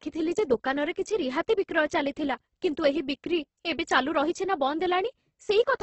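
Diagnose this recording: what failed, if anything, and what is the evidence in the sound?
Opus compression runs throughout this speech, most likely at the codec stage. Nothing is heard above 8.2 kHz, and the speech is rough and grainy, with noisy texture where detail should be. That points to a wideband music-mode encode starved of bits, around 12 kbps.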